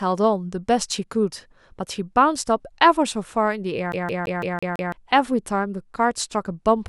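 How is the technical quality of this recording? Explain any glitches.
The recording has one clear glitch, a CD stuck on one turn. From 3.92 to 4.92 s, a scratch keeps throwing the laser back one track, so a 0.17 s slice of speech replays six times with brief mutes at each jump. The waveform shows identical blocks separated by tiny gaps, and the spectrogram shows the same pattern repeating like a stamp.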